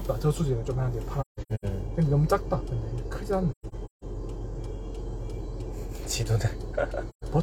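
AAC frame loss with muting leaves soft-faded holes: about 341 ms missing across 1.21–1.65 s and across 3.51–4.04 s, with runs of about 150 ms, then 128 ms at 7.09–7.24 s. Lost frames were decoded as silence, and the overlapping windows fade out and back in.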